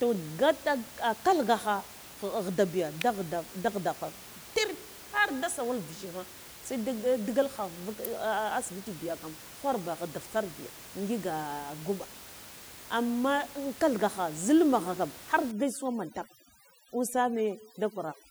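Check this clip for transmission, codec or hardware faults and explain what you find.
Two kinds of fault are present: two electrical switching spikes and, near the end, overdone noise removal.

At 3.01 s and 8.05 s, an electrical switching spike is heard as a sharp snap over the speech, most likely a nearby switch or discharge arcing into the audio line.

From 15.51 s to the end, overdone noise removal cuts frequency bands near its noise estimate too hard, leaving twinkling specks in the background. The room noise is about 18 dB below speech.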